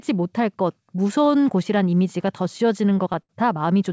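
Speech carried over a call path whose band ends at 8 kHz, consistent with a G.722 wideband codec, shows repeated stalls (stutter) from 2.58 to 3.31 s. The jitter buffer ran dry seven times, and the receiver stretched the preceding sound to bridge each gap, the longest about 72 ms. Together these fills make up roughly 18% of that stretch. Nothing is lost, but the speech drags and stutters.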